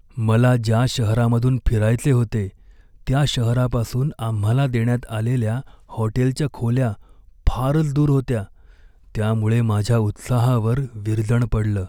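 No technical faults can be heard in this recording.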